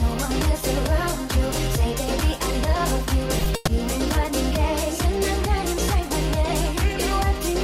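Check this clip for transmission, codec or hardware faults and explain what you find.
One fault is audible, a call audio freeze from 3.55 to 3.69 s. Packets were most likely delayed and the jitter buffer ran dry, so about 120 ms is filled with a fading buzz of the preceding sound. Playback then resumes where it stopped, nothing lost, but 120 ms later.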